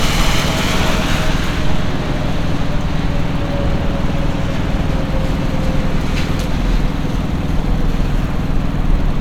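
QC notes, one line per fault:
Nothing stood out on listening to the sound in this clip.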